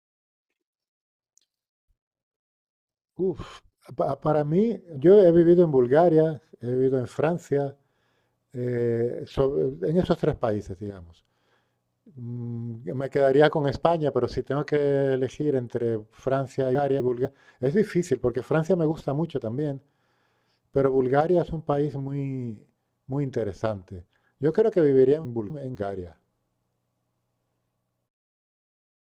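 At 16.75 to 17.25 s and again at 25.25 to 25.75 s, the speech has chunks out of order: a 250 ms block plays one chunk late, after its successor. Nothing is missing, but each span sounds briefly jumbled, with three hard joins.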